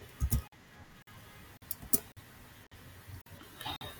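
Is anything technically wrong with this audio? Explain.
Yes. The speech has a gap between chunks at 0.48, 1.02, 1.57, 2.12, 2.67, 3.22 and 3.76 s. Each 48 ms silence falls between 0.5 s chunks, so the sound stutters regularly without losing any speech.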